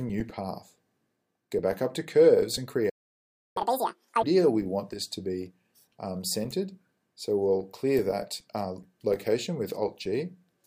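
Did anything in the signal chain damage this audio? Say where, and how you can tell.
Yes. The sound drops out from 2.89 to 3.57 s, about 0.66 s of silence. This is a playback stall, likely from the player running out of data or its thread being blocked.

From 3.57 to 4.23 s the audio runs at double speed, with pitch raised roughly ten semitones. This is catch-up at higher speed: the player resamples its backlog to win back lost time.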